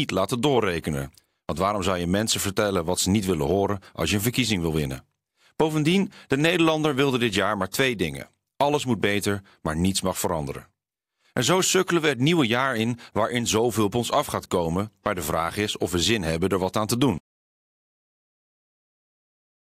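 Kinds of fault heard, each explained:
Audio dropout to silence: after "er wat aan te", at 17.18 s, the speech cuts off mid-flow and the file holds silence through to the end, with no room tone, likely from the input signal being lost while recording continued.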